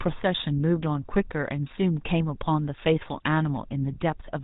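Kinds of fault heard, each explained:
GSM full-rate codec: The speech passes through an early mobile-phone codec for the whole clip. It rebuilds the voice from a vocal-tract model and a coarse pulse excitation. Nothing above 4 kHz survives. The result is a plainly audible buzzy, gravelly roughness, which fits a 13 kbps full-rate stream.
GSM bit errors: From 1.65 to 1.70 s the speech breaks into a brief squawk and gargle. Corrupted filter, pitch or gain values reached the decoder, warping the spectrum and level. The 54 ms burst points to roughly three damaged 20 ms frames.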